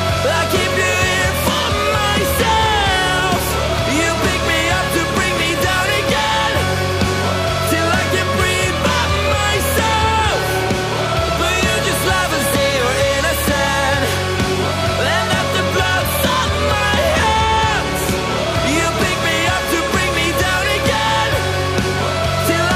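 Nothing in this audio stood out as a technical problem on listening.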